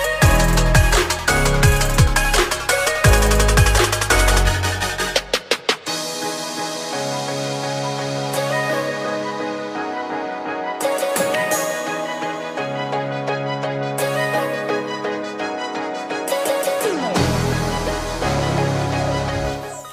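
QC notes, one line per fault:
No faults noted on listening; nothing to log.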